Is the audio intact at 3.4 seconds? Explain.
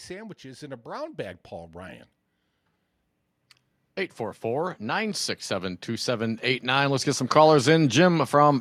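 Yes, the speech at 3.4 seconds is intact, with no audible fault at that moment.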